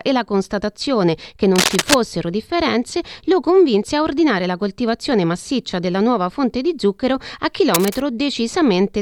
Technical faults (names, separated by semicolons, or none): cable scratch noise